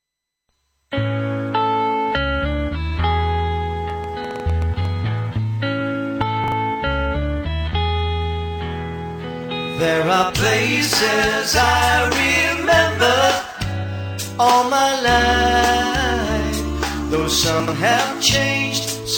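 From 3.9 to 4.86 s, likely interference from nearby equipment or a faulty connection injects a train of clicks: about ten similar pulses at an uneven pace of roughly 8 per second, peaking a few decibels above the sound, heard as irregular ticking on top of it. At 6.44 to 6.52 s, chunks out of order occur when a 40 ms chunk arrives one chunk late, and again at 17.6 to 17.72 s, two chunks late. Nothing is lost, but the misplaced piece and its three hard joins make a brief jumbled stutter.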